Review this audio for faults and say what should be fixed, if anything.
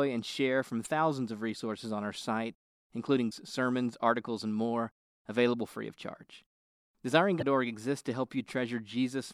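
Three short bursts of damaged data in a compressed stream turn up in this speech: 0.83–0.87 s (between "and share from" and "of resources on our"), 3.28–3.33 s (just before "sermons articles and more"), and 7.38–7.43 s. Each is a brief blip of about 45 ms where corrupted bytes throw the decoder off its frames, so it loses sync and skips ahead to the next good header. Verifying file integrity with checksums during transfer and storage would keep this from happening.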